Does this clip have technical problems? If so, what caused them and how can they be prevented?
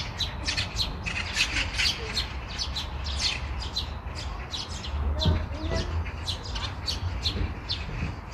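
No, the recording of sounds has no audible technical faults, so nothing needs to be traced or prevented.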